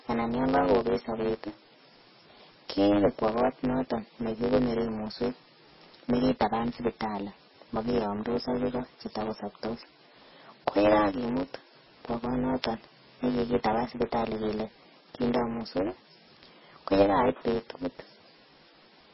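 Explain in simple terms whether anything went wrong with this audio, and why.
Yes, two things went wrong, and both last the whole recording. First, a block size mismatch (truncated): one stage of the system hands over chunks of audio bigger than the next stage accepts, so the tail of every chunk gets thrown away. That leaves a steady buzz at 100 Hz and makes the speech run about 1.09 times too fast, though the timbre stays the same.

Second, the sound has very likely been squeezed hard with MP3 compression. With too little data to work with, the encoder drops everything above 5.6 kHz, so the speech sounds dull and muffled, and the quieter detail that remains comes and goes, giving a watery, swirly quality.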